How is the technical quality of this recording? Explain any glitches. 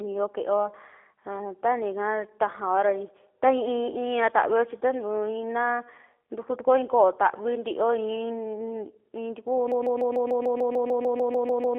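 The technical quality is poor. The whole clip has plainly audible low-bitrate telephone coding, and it ends in a stuck loop.

G.729 codec damage runs throughout. The sound sits in a narrow 300 Hz to 3.5 kHz telephone band, with nothing above 3.6 kHz. That points to 8 kbit/s G.729A. The codec rebuilds speech from a filter model and a few pulses per frame. So it sounds plainly rough and synthetic.

A broken-record loop starts at 9.72 s and lasts to the end. A 148 ms fragment repeats back to back, about 14 times. The stream likely stalled and kept replaying its last buffered piece. The speech that should have followed is lost, replaced by a stuttering repetition.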